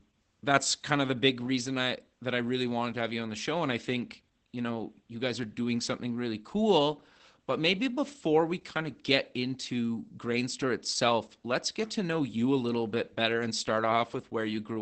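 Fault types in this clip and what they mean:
Opus voice compression: The speech passes through a low-rate voice coder that rebuilds it from a linear-prediction model, which fits SILK mode at roughly 12 kbps, and the damage is plainly audible throughout. With the band capped at wideband, the voice sounds muffled, hoarse and faintly robotic. On a spectrogram, energy stops at a flat ceiling near 8 kHz, and the harmonics look smeared and grainy. The waveform shows blurred fine detail in a texture that fits 20 ms frames.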